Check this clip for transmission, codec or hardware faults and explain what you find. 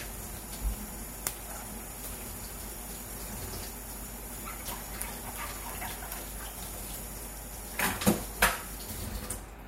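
Two hardware faults run through the whole clip.

Mains hum, throughout: a ground loop or nearby transformer couples the 50 Hz power line into the signal, leaving a steady low tone only somewhat below the sound itself.

Sample clock jitter, throughout: the converter's unstable clock samples a few microseconds early or late, adding a rough hiss that swells with loud, bright passages.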